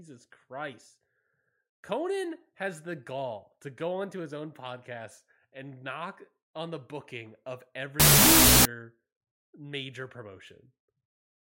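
Wrong sample width from 8.00 to 8.65 s in this speech recording: the data there are read with fewer bytes per sample than they were written with. Every stored sample is split into two, so that stretch plays at 0.5 times speed and an octave low, buried under loud, harsh noise. That halving fits 32-bit float data being read as 16-bit integers, where each float's bytes become two integer values, only one of which keeps the top bits of the real signal.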